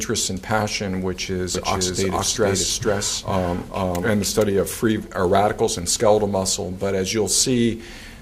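A second capture path or misaligned edit likely mixed the audio in twice, so from 1.55 to 4.45 s a doubled audio track trails about half a second behind, roughly equally loud, starting and stopping abruptly.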